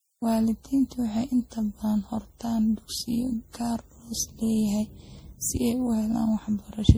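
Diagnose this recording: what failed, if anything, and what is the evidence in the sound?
The fault sits at the codec stage, and it runs through the whole clip. The speech sounds swirly and hollow, with smeared consonant attacks and a gritty haze. That is worse than one lossy pass would leave. It points to generation loss, likely from repeated MP3 coding at around 64 kbit/s, perhaps half a dozen passes or more. Each re-encode quantises again on a shifted frame grid, so noise and spectral holes stack.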